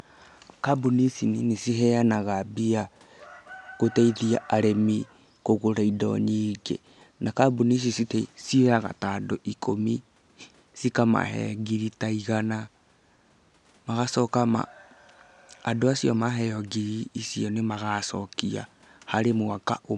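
A speech recording with nothing technically wrong with it; the faint room noise sits about 41 dB below the speech.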